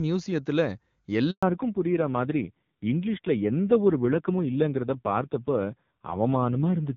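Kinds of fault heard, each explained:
Handover gap: the sound dies away at 1.31 s and stays silent for 120 ms, a clean hole rather than the buzzy fill of concealed packet loss.
Fallback to narrowband: from 1.43 s nothing above 4 kHz remains and the speech turns dull and raspy, fitting low-rate AMR-NB rather than a clean low-pass filter.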